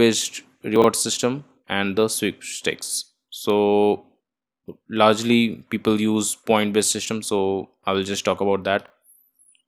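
Chunks out of order at 0.76–0.84 s, just before "system and the sweepstakes", and at 8.86–8.9 s, after "will just talk about". A 20 ms piece of the speech plays three chunks late, then one chunk late. The misplaced audio causes a brief jumbled stutter.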